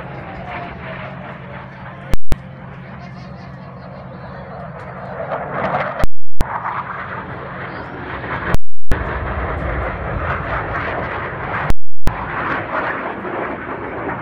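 At 2.14 to 2.32 s, then 6.04 to 6.41, 8.55 to 8.92 and 11.70 to 12.07 s, you get invalid numbers at full scale. A calculation blew up and the output slammed to maximum, giving a loud pop in and out with dead air between, lasting 0.19 s first and then 0.37 s each time.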